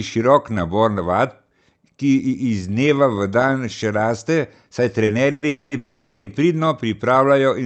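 A short stall from a late packet hits this speech at 5.05 to 5.10 s: for about 20 ms the sound just before is held on with a faint buzz or dip, then the speech resumes exactly where it stopped, so nothing is lost but everything after arrives 20 ms later. The stretch points to a packet arriving after its playout time, so the jitter buffer ran dry and the receiver extended the last sound until the packet came.

A call audio freeze follows three times in quick succession, at 5.31 to 5.45 s, 5.48 to 5.74 s and 5.77 to 6.29 s, each longer than the last: about 110, 230 and 490 ms of filler. In each, the last sound carries on as a fading buzz or hiss rather than dropping to silence, and the speech then continues from the point where it froze, so these pauses add nearly 0.85 s of delay without removing any speech. The likely cause is a burst of packets held up in transit, emptying the jitter buffer repeatedly until they arrived. 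The call path uses Opus, and its top end stops around 8 kHz.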